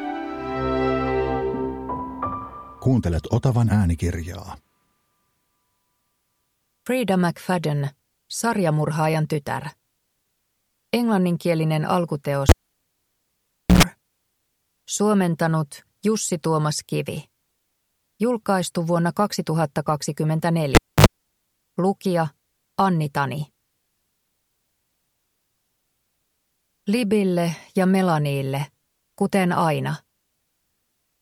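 At 12.49 s a cable is pulled and plugged in. A pop opens a gap of about 1.29 s. Then a 107 ms burst of 60 Hz mains buzz comes from the plug tip touching, and a second pop brings the sound back by 13.83 s. The same fault recurs at 20.75 s, with a 0.26 s gap and 59 ms of 50 Hz buzz before 21.06 s. A spectrogram shows broadband spikes bracketing an empty band, with harmonic hum lines just before the return.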